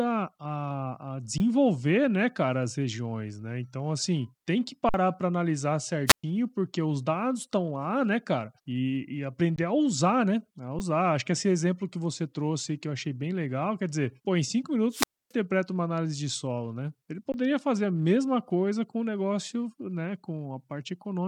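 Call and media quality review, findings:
Underrun with held sample, 1.38–1.40 s after "a a", 4.89–4.94 s between "assim tem que" and "para analisar", 9.56–9.58 s before "a usar né", 10.79 s, 17.32–17.34 s. Playback buffer starved; DAC holds its last value, so the waveform sits flat. Gaps of 20, 50, 20, 11 and 20 ms. Roughly that much live speech discarded each time.

Wireless microphone squelch dropout, 6.07–6.24 s and 14.91–15.33 s. FM mic RF level fading below the receiver's squelch threshold: a short burst of rising hiss, then the output muted, about 119 ms and 272 ms of near silence respectively. Suspect the radio path to the receiver.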